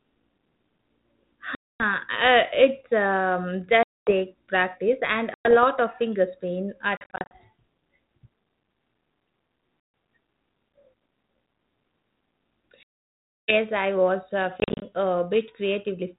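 Hard-edged silent holes cut into the speech at 1.55, 3.83, 5.34, 9.8 and 12.83 s (the longest, about 650 ms), with bursts of short dropouts of up to 40 ms at 6.97 to 7.32 s and 14.6 to 14.83 s. After each one the speech returns slightly distorted, at times with a click or at the wrong level. This is packet loss on an ADPCM call. The narrowband G.726 stream, which fits 32 kbit/s, lost packets that were filled with silence. That left the decoder's adaptive predictor and step size out of step with the sender's until they caught up again over some tens of milliseconds.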